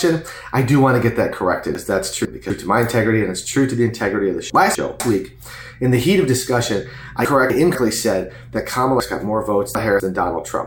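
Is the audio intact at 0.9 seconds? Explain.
Yes, the audio is intact at 0.9 seconds, with no dropout, click, distortion or other fault at that point.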